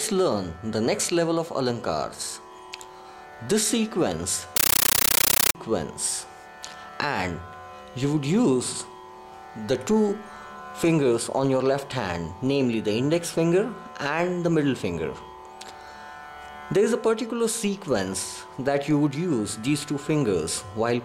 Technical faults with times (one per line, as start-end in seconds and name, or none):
4.56-5.55 compressed stream played as audio